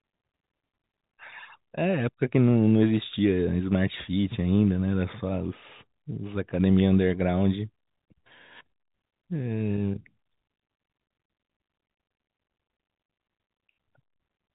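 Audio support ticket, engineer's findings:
No faults found in the speech; the G.711 telephone coding path works as expected, passing nothing above 3.8 kHz.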